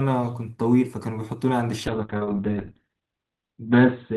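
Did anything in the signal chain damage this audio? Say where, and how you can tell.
Yes. From 1.88 s to the end, the speech turns rough and watery and its top end vanishes above 4 kHz, bottoming out for about 1.17 s. This is a call bitrate drop in the codec stage. The encoder's budget collapsed, which fits a fall to roughly 6 kbps, so it coded coarsely and cut the bandwidth.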